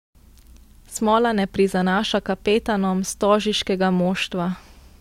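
No technical faults can be heard anywhere in this speech.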